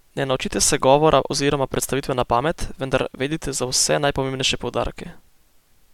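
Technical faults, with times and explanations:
No technical faults heard.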